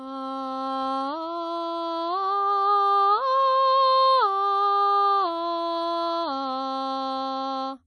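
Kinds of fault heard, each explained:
WMA compression: the music sounds smeared and ringing, with a washy hiss that swells and fades with the signal, and nothing is heard above 10.1 kHz, so the top end is dull. This is plainly audible throughout. The likely cause is an early Windows Media Audio encoder at a low bitrate, around 32 kbps. Its long transform blocks spread quantisation noise over tens of milliseconds, and quieter spectral detail is discarded outright.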